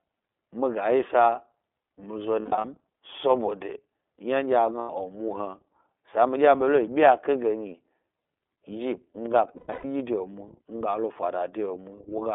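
Throughout, the speech carries the iLBC codec sound: narrowband, confined to roughly 250 Hz to 3.5 kHz, slightly rough and synthetic, which fits iLBC's 30 ms frame mode rather than plain band-limiting.

Lost iLBC frames occur at 2.4 to 2.65 s just after "mi zo", at 4.80 to 4.90 s, and at 9.47 to 9.85 s. Each gap becomes a held, buzzy vowel rather than silence, and the speech recovers immediately afterward.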